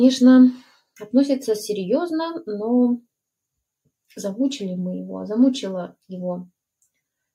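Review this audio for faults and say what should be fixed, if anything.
Between 0.63 and 0.80 s the sound is cut by the noise suppressor: it judged this stretch to be noise and pulled it down by as much as about 11 dB, so the sound sinks across roughly 150 ms. On a waveform the envelope narrows abruptly there. A spectrogram shows the energy thinning across the band while neighbouring frames stay full. To prevent it, lower the suppressor's aggressiveness or lengthen its release so sustained and decaying sound isn't mistaken for noise.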